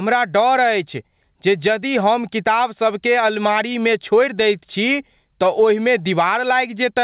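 Across the whole speech clip, the gain is pulled down by around 10 dB as soon as a loud syllable arrives, so loud and quiet passages sit squashed close together. This gain pumping is likely caused by the input gain being set far too high, with a fast limiter or compressor clamping down on each peak. The call path's narrow band, with nothing above 4 kHz, is also audible.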